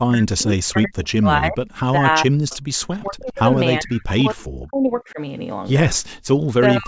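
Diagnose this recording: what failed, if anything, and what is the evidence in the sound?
Speech suppressed in double talk, in the call processing stage. The speech dips or drops out from 0 to 2.05 s, 2.21 to 2.76 s, 3.0 to 3.57 s, 3.79 to 5.2 s, and 6.48 s to the end. The deepest drops are around 30 to 40 dB. The likely cause is an echo canceller that could not separate near speech from far-end echo, so it attenuated both.

Echo leak, also in call processing. From 2.5 to 2.57 s a faint delayed copy of the speech appears, about 0.4 s behind and roughly 25 dB below it. This is likely residual loudspeaker echo that the canceller missed and returned to the line.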